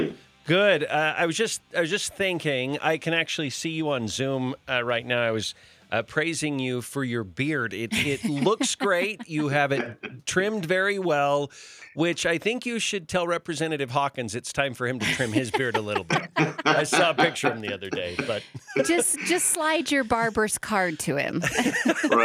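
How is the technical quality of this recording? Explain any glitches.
No technical glitches can be heard anywhere in the recording. There is nothing to explain, as nothing interrupts or disturbs the sound at any point.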